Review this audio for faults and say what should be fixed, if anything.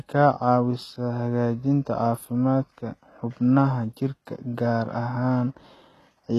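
Across the whole clip, the speech was likely squeezed through HE-AAC compression at a very low rate, consistent with a stream around 16 kbps. Only the lower spectrum is truly coded, and the treble is rebuilt by copying lower bands upward under a coarse envelope, with nothing above 12.3 kHz. Because those copied harmonics don't align with the real ones, s sounds turn gritty and lispy throughout. Encode at a higher bitrate, or with plain AAC, from the original source.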